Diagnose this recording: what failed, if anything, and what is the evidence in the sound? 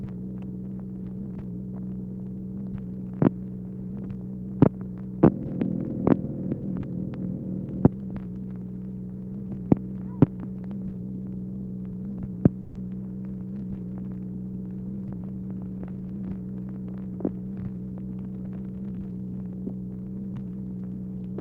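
At 12.61 to 12.77 s there's a call audio freeze: about 140 ms where the last sound smears on as a fading buzz, then picks up right where it stopped with nothing lost. That's network stage, most likely delayed packets draining the jitter buffer so the receiver padded the wait.

Just after, from 15.10 to 16.37 s, there's a jitter buffer speed-up. The audio runs at about 110% with the pitch unchanged, so it feels a bit hurried. The buffer was over its target, so it cut short pitch-period slices, around 150 ms in total, to claw back delay.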